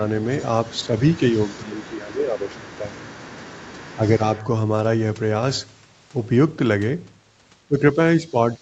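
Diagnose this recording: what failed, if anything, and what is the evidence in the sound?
The other side's voice leaks through at the call-processing stage. A second voice sits under the talker from 0.08 to 4.42 s, roughly 25 dB below the main speech. It returns faintly from 8.28 to 8.6 s, around 35 dB down. The likely cause is the echo canceller. The far end's voice played from the device's loudspeaker reached the microphone, and the canceller left part of it in the outgoing signal.

Speech is suppressed in double talk, again at the call-processing stage. At 0.87 s the talker dips briefly, by a few decibels. From 1.32 to 3.02 s the level drops hard, as much as about 15 dB. It falls by around 10 dB from 3.96 to 4.23 s and again from 7.68 s to the end. These dips sit against the leaked far-end voice. Most likely the canceller could not separate the talker from the echo and turned both down together.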